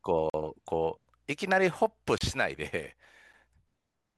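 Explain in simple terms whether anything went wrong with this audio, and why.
The speech drops out three times, each a block of digital silence. The first runs from 0.30 to 0.34 s, about 43 ms. The second runs from 2.18 to 2.21 s, about 28 ms. The third, at 3.33 s, lasts only 6 ms. Each time, the sound jumps straight to zero and back with no fade. The longer gaps sound like short holes, and the shortest is just a tick. The likely cause is the program not filling its output buffer in time.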